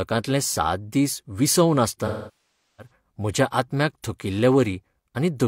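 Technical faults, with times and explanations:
2.06 to 2.91 s, AAC frame loss with concealment: the speech goes briefly smeared and noisy, then decays to near silence and fades back in around 2.91 s. The decoder lost a run of frames and kept guessing from the last good spectrum. A gap this long, roughly 725 ms, fits about seventeen AAC frames. Guessing that far ahead doesn't hold up, so the concealment ramps the level down until real frames arrive again.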